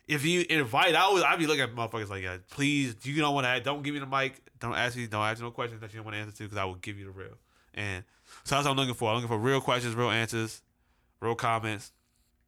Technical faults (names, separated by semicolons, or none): none